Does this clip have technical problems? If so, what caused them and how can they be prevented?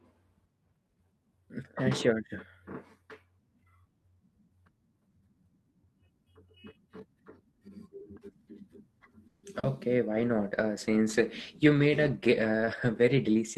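Yes. From 9.27 to 9.45 s there is a call audio freeze: the last sound is stretched into a fading buzz or hiss for about 160 ms before the speech resumes where it left off. Packets were likely held up in transit, so the jitter buffer ran empty and the receiver filled the wait. Nothing was lost, but the playback delay grew by 160 ms. A steadier network path or a slightly deeper adaptive jitter buffer would prevent it.

From 9.59 to 9.65 s there is a short concealed packet loss. About 40 ms of audio never arrived in time, and the receiver extrapolated from the preceding sound before blending back, leaving a brief smeared patch. Reducing packet loss on the link, or enabling forward error correction, would prevent it.

From 10.09 s to the end there is a call bitrate drop. The audio turns coarser and rougher because the bandwidth estimate fell and the encoder dropped from 48 kbps to 13 kbps for the rest of the clip, spending far fewer bits on each moment of sound. 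Ensuring more reliable upstream bandwidth, or setting a higher minimum bitrate, would prevent it.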